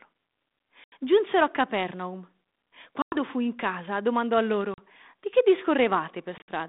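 At 0.84 to 0.93 s, 3.02 to 3.17 s, 4.74 to 4.79 s and 6.38 to 6.48 s, the speech drops out in packet loss on an ADPCM call. Gaps of 80, 100 and 40 ms appear as flat, hard-edged holes in the waveform and empty vertical bands on the spectrogram. The last is broken into scattered gaps, the longest 60 ms. After each gap the decoder's predictor and step size no longer match the sender's, so speech returns slightly distorted before settling. Around it, the 32 kbit/s G.726 line caps the band near 3.7 kHz.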